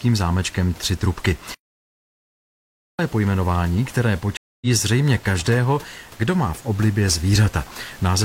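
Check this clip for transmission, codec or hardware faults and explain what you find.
Two transmission faults interrupt the speech, both gaps in the delivered audio.

From 1.54 s to 2.99 s there is a playback stall. The player was likely starved of data or had its output thread blocked, so nothing reached the output for about 1.45 s. The speech cuts off mid-flow into dead silence, then carries on after the gap. The faint room noise, about 24 dB below the speech, vanishes along with it, which marks the gap as a dropout in playback rather than a pause in the recording.

From 4.37 s to 4.67 s there is a stream reconnect. The connection dropped, the player fell silent for 245 ms, re-established the link and started a fresh decoder partway through the stream. The speech then picks up at a point roughly a fifth of a second further on, so a short stretch of speech is skipped. The restart shows as a soft onset as the new decoder's first output comes in muted or fading up.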